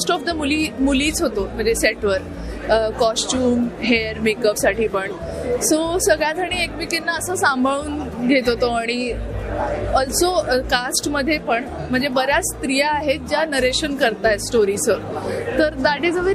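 At 4.53 s the audio jumps forward as compressed frames are skipped: roughly two frames, around 30 ms of material, never reach the output, either lost from the stream or rejected by the decoder.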